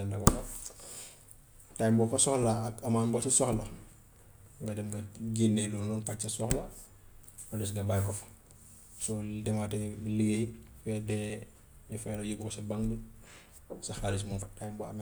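The capture side likely fell behind and let the hardware overwrite samples before they were read, a dropped buffer (overrun). At 11.3 s a sliver of the speech, around 20 ms, is lost and the two sides are butted together, leaving a jump. At 14.42 s a larger chunk, roughly 70 ms, vanishes with no silence in its place, so the voice skips forward audibly.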